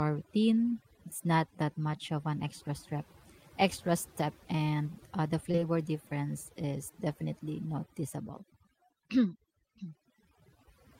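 Throughout the recording, overdone noise removal is at work. The suppressor was set so aggressively that any frequency band sitting near its noise estimate gets pushed almost to nothing, and the softer parts of the speech are cut along with the noise. The gaps between phrases fall to near silence scattered with twinkling specks. Those isolated, flickering tones in the pauses are what distinguish it from a low-bitrate codec, whose smearing stays within the speech itself.

From 5.51 s to 5.63 s there is a run of short concealed packet loss. Three consecutive 20 ms chunks went missing, starting at 5.51 s, 5.56 s and 5.59 s. Each time, the receiver patched the hole by extending the preceding sound for roughly 20 ms before blending back into real audio. The result is a brief wobbly smear rather than a hard click or a silent dropout. That synthetic continuation, with no true gap, is what separates it from plain data loss.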